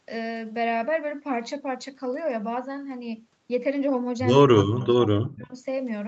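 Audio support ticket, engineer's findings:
Talker's level ducks, deepest about 25 dB, 4.47–4.82 s, then cuts out, down about 40 dB, 5.06–5.55 s. Likely speech suppressed in double talk: the canceller mistook the talker for far-end echo and attenuated.

Faint delayed copy of the voice, about 25 dB under speech, 4.78–4.87 s, lagging 179 ms. Probable echo leak: residual loudspeaker pickup not fully removed by the far-end canceller.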